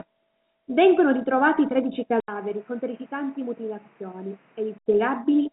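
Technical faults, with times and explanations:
2.20–4.86 s, input switched to a poorer device: the speech drops out for 80 ms, then returns duller and boxier, with nothing above 3.2 kHz where the rest of the clip reaches almost 3.9 kHz, the ceiling of its telephone-band G.711 coding. The level falls by around 10 dB, and a new background noise sits only about 30 dB below the speech. This is likely a change of capture device mid-recording; full bandwidth returns at 4.86 s.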